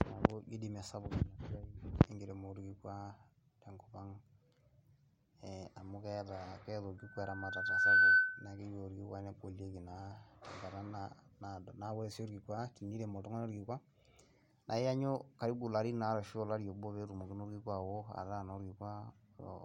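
From 6.98 to 8.59 s, loudspeaker feedback squeal: the microphone re-captures its own loudspeaker, and at 1.5 kHz the loop gain passes unity. A pure tone swells over about a second to roughly 15 dB above the speech, showing as one bright horizontal spectrogram line and a ballooning waveform envelope.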